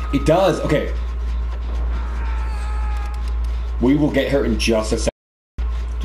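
At 5.09 s the sound cuts off abruptly into silence, with no background or room tone, and resumes mid-flow at 5.58 s, leaving about 0.49 s missing. This is an audio dropout to silence, likely from the input being lost while the recorder kept writing zeros.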